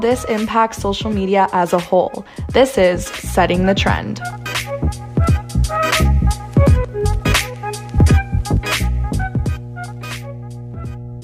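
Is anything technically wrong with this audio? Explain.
Yes. From 3.37 s to the end there is mains hum: a steady 60 Hz tone, well below the signal, from a ground loop or nearby transformer coupling the power line in.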